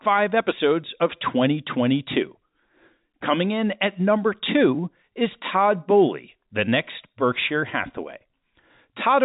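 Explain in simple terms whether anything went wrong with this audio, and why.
No, nothing went wrong with this speech recording.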